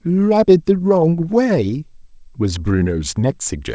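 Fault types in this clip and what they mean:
There are no fault types in this clip.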